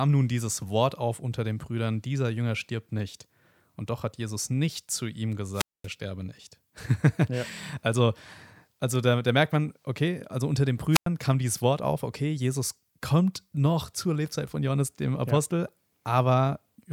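Wireless microphone squelch dropout occurs at 5.53–5.88 s, after "nicht zu ihm" and before "sterbe nicht", and again at 10.91–11.07 s, after "okay also unter den" and before "kam dieses". Each time, the radio link fades, hiss rises, and the receiver's squelch mutes the output, for about 228 ms and then 99 ms.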